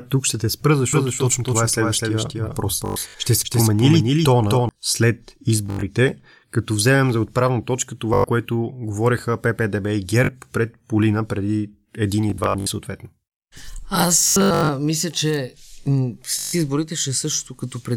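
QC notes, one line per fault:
0.93–4.69 s, doubled audio track: a second copy of the speech sits underneath, likely from a slower capture path or an out-of-step edit, trailing by roughly 300 ms at about 5 dB down. It is a dry, full-band repeat with no room tail, and it cuts in and out abruptly.
2.86–3.14, 5.66–5.83, 8.14–8.24 (after "вземем за отправна точка"), 10.24–10.29, 12.30–12.67 (after "преди един и"), 14.24–14.69 (before "мисля че") and 16.39–16.53 s, Bluetooth stutter: late or lost wireless packets made the receiver replay its last short slice, causing a buzzing, machine-gun repeat. Between 41 and 325 ms is lost per event, with runs up to 102 ms, and the speech then resumes further on.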